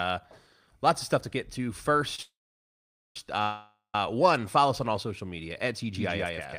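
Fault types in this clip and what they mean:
short stall from a late packet: A packet arrived after it was due, so the jitter buffer ran dry for a moment and the receiver stretched the last sound to cover the wait. Just after "stuff to get to", at about 2.15 to 2.19 s, a sound is held for 29 ms too long before playback resumes from the same point. Nothing is lost, but everything after it is pushed 29 ms later.
call audio freeze: Packets were likely held up in transit, leaving the jitter buffer empty for much longer. The receiver carried the last sound forward as a fading fill that falls into silence, then resumed where it stopped once the packets arrived. At 2.22 to 3.16 s, 932 ms is inserted, 840 ms of it silent. At 3.42 to 3.95 s, just before "one follow us on", 514 ms is inserted, 120 ms silent. Nothing is missing.
doubled audio track: The same audio is mixed in twice, likely from a second, slower capture path or from an edit holding two copies out of step. 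From about 5.95 s to the end, a full-band copy starts abruptly and trails the original by roughly 150 ms at about the same level. It carries no decay or room colour, so it sounds like a distinct repeat rather than reverberation.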